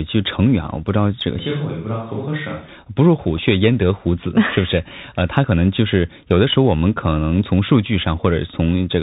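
A speech recording with a narrow, muffled quality throughout: nothing above about 4 kHz, a scratchy edge on s sounds and strained loud high passages, and a fine granular hiss beneath the voice. This is the Bluetooth CVSD headset codec, which fits a 64 kbit/s link. It encodes the audio as a stream of single up-or-down steps whose size adapts, so bright loud peaks outrun the step. From 1.39 s to 2.68 s the voice abruptly turns roomy and hollow, thinner in the bass and about 5 dB quieter, with faint room noise far below the speech. The likely cause is a switch to a distant microphone, with the close microphone's signal dropping out before the sound snaps back. At 3.37 s a brief rushing crackle cuts through the sound without any sharp click. These are bit errors on a Bluetooth voice link, a burst at an error rate of a couple of percent. Each flipped CVSD bit carries only a small step and its effect fades, so the errors come through as noise rather than pops.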